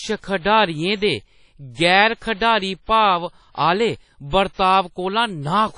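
Throughout the speech, the signal has most likely passed through WMA compression at a low rate, and the damage is plainly audible, consistent with a bitrate around 32 kbps. The transform coder has too few bits, so quantisation noise smears across tens of milliseconds around each syllable and weak spectral detail is dropped entirely. Nothing survives above 10.1 kHz, which dulls sibilants. The result is a ringing, washy texture with a hiss that swells and fades along with the speech.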